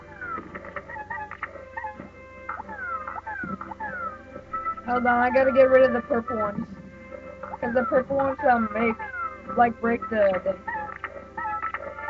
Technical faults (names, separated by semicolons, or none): none